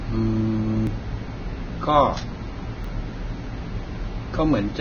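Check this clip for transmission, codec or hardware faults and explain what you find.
Two kinds of fault are present: heavy lossy coding across the whole clip, and two brief skips where audio was lost.

Throughout, likely Vorbis compression at a very low bitrate, around 18 kbps, lowers the cut-off and coarsely quantises the upper band, leaving the speech hissy, grainy and dull.

At 0.87 s and 2.84 s, a likely dropped buffer (overrun) lets roughly 10 ms of audio be overwritten before capture, so the sound jumps forward.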